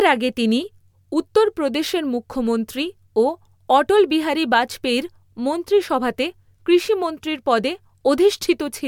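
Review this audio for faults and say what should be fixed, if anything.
Nothing needs fixing; no faults can be heard.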